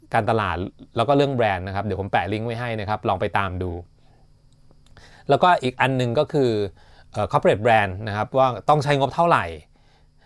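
Nothing goes wrong anywhere in the recording; the speech carries on steadily with no audible technical problem at any point.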